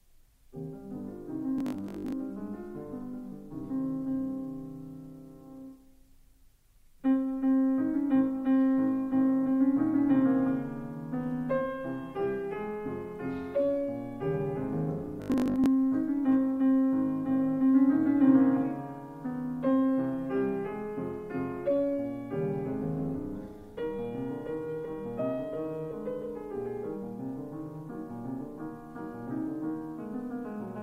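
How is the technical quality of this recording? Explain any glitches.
Two short glitches affect the recording, at 1.58 to 2.12 s and 15.22 to 15.66 s. Both are robotic sound from repeated short buffers: a rigid, metallic 50 Hz buzz. The likely cause is audio arriving too seldom, so about half of each stretch is filled by replaying 20 ms chunks.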